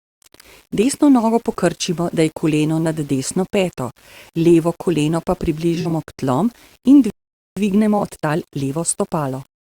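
Speech clip with grainy distortion throughout that tracks the voice and sits roughly 35 dB below it. This is low bit depth without dither, with rounding to about 7 bits the likely cause. AAC frame loss with concealment smears the sound between 5.74 and 5.92 s, after "peto levo koleno pa" and before "k tlom in". About 85 ms of gaps are scattered over 171 ms, which fits four lost frames patched from neighbouring spectra. A shorter 21 ms patch occurs at 7.98 to 8.01 s. Right after "k tlom in", a playback stall silences the audio from 7.10 to 7.57 s for 466 ms, likely with the player starved of data. Time-compressed catch-up follows from 7.57 s to the end, running 1.1 times fast at normal pitch as the backlog is trimmed.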